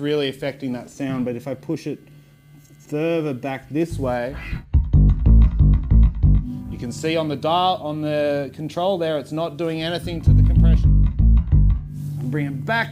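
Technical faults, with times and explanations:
No technical faults are audible anywhere in the clip.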